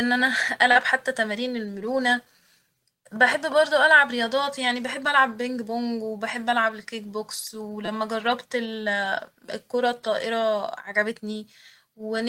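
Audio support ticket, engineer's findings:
Short concealed packet loss, 0.71–0.77 s, just before "حتى تمارين المرونة": brief smear. About 40 ms never arrived; the receiver's concealment extended the preceding sound and crossfaded back. Spectrogram shows a smoothed, held spectrum with a soft seam; no hard gap in the waveform.

Repeated buffer, 7.85–7.88 s (right after "وبحب ألعب الكيك بوكس") and 9.46–9.48 s: short buzz. Playout underrun replayed a 5.8 ms block four extra times, which fits a 256-sample buffer. Waveform shows identical repeated cycles with hard joins; the spectrogram shows evenly spaced vertical striations, with essentially no audio lost.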